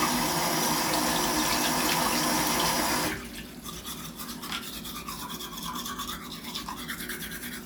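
No faults were heard anywhere in the clip.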